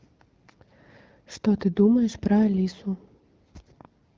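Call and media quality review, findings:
No faults found in the speech. The wideband AMR (HD Voice) codec path is audible as a band limit near 7 kHz with light coding texture, which fits a rate around 12.65 kbit/s.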